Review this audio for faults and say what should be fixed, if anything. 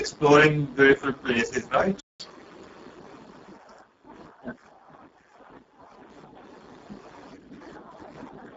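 The whole recording passed through the Speex codec at a setting that sounds like one of its lowest, around 6 kbps, starving the excitation signal of bits. The speech comes out heavily damaged, hoarse, noisy and edging toward robotic, with nothing above 7.7 kHz. Encoding at a higher Speex quality setting, or moving to a modern codec such as Opus, would prevent this.

At 2.00 s, just after "beautiful places", the player most likely ran dry of buffered data and produced no output. The speech cuts off mid-flow and stays silent until 2.20 s before resuming. Holding more data in the jitter buffer before playback starts would prevent this gap.

From 2.20 to 2.96 s the player works through the backlog built up during the stall by resampling it at 1.25 times normal speed. The speech sounds hurried and rises by about four semitones before settling back to normal pitch. Recovering lost time by gently trimming silences instead of resampling would prevent the audible pitch jump.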